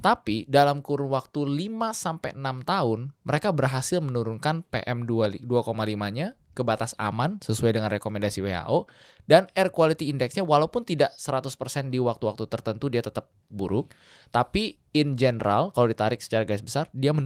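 Nothing technical goes wrong anywhere in this stretch of speech; there's simply no fault to point to.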